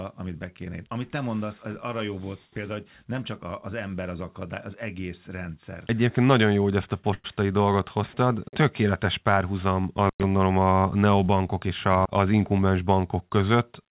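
At 7.14 to 7.26 s, between "jó hogy ezt a" and "dolgot hoztad", a short stall from a late packet holds the last sound for 100 ms, then resumes. Nothing is skipped, which sets it apart from a dropout.

At 10.05 to 10.23 s, just before "a neobankok", an intermittent contact opens the line for about 105 ms. The audio cuts to faint hiss with crackle at both edges, rather than a smooth held sound.

From 11.68 to 12.59 s, after "a neobankok", a jitter buffer speed-up trims short pitch-period pieces, removing roughly a tenth of a second. The speech runs 12% faster and sounds hurried, but the pitch stays the same, unlike a simple playback-rate change.

All of this comes through the band-limited call path, with nothing above 4 kHz, which fits 64 kbps G.711 mu-law.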